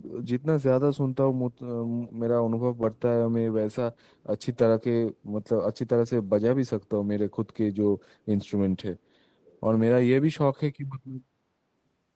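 At 1.86 to 2.13 s, 8.45 to 8.51 s and 9.42 to 9.61 s a faint, delayed copy of the speech surfaces, far below the main voice. This is echo leak, likely from a far-end loudspeaker whose echo canceller let some of its microphone pickup return. It differs from room reverberation because it is a separate repeat at a constant 435 ms lag, heard in brief scraps rather than as a smooth decaying tail.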